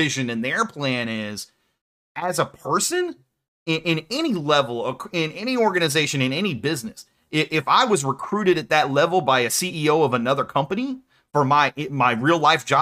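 Nothing goes wrong anywhere in this speech recording, so there's no fault to point to at any moment.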